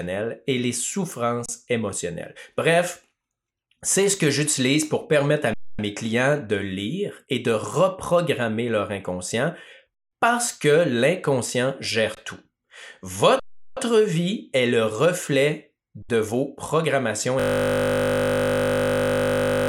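The output buffer ran empty six times and the converter held its last value, an underrun with held sample. Each time the speech freezes flat and then resumes where it stopped with nothing lost: at 1.46 s for 29 ms, at 5.54 s for 0.25 s between "j'utilise pour permettre à" and "mes clients de", at 9.94 s for 0.19 s before "parce que l'inconscient", at 12.15 s for 20 ms, at 13.40 s for 0.37 s before "vie est le reflet", and at 16.02 s for 66 ms. The longer gaps fit blocks of 8192 and 16384 samples at 44.1 kHz.

From 17.40 s to the end, the system froze while the hardware kept cycling its ring buffer, a system hang loop. A 20 ms slice repeats about 115 times, which sounds like a steady 50 Hz buzz.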